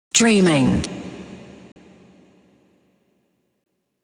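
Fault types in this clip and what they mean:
Bluetooth dropout: at 1.72 s and 3.64 s the sound cuts to silence for 40 ms and 20 ms, likely late wireless packets being dropped, then resumes further along.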